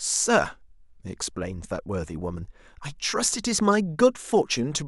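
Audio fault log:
Nothing stood out on listening to this speech recording.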